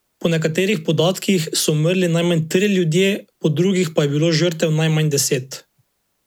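Speech recording with no technical faults present.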